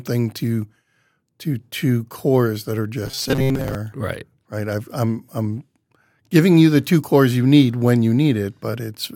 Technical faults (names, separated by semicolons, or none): robotic sound from repeated short buffers